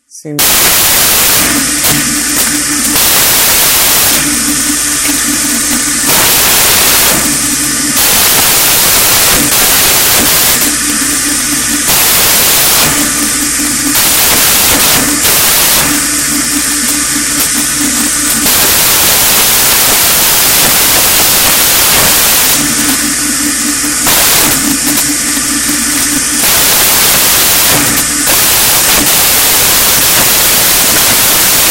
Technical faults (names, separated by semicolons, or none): samples built from the wrong bytes